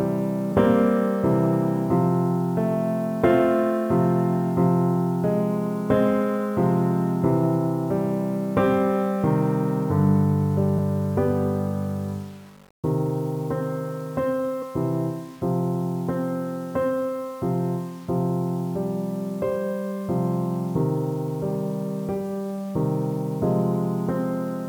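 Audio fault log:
throughout: low bit depth without dither. The sound is held to what sounds like 8 bits, rounded to the nearest step with no noise added first, so the error sits only about 30 dB below the signal and tracks it exactly. Quiet passages turn coarse and grainy, and the faintest parts collapse into stepped sputter or silence. The grit moves with the sound itself, so it differs from jitter, which stays smooth and hiss-like and follows loudness and treble. That points to a likely truncated-resolution path.
throughout: sample clock jitter. The converter's timing wanders by something like 5 microseconds, so each sample lands slightly off its proper instant. Where the waveform moves fastest, that timing slip becomes a level error, heard as a roughness roughly 35 dB down that swells with loud and bright sound and disappears in silence. Unlike the bit-depth grain, it does not worsen as the sound gets quieter. 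It rises with slope and high frequencies instead.
14.61–14.63 s: compressed frames skipped. Around four compressed frames of about 21.3 ms each go missing, so the audio jumps forward by roughly a tenth of a second. The decoder blends overlapping frames at the seam, so the join comes out as a short smeared blip, not the sharp click of a plain sample-level cut, and not a gap of silence. The missing stretch simply never plays.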